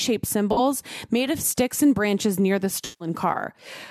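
Corrupt frame concealed at 0.52 to 0.60 s, just before "made of sticks and", and again at 2.85 to 3.09 s, right after "and branches near the", in this speech clip. In each case damaged AAC data was caught by the decoder, which papered over it by muting or reusing a scrambled version of the last good spectrum. The short gap fits about three lost frames, the longer one about seven.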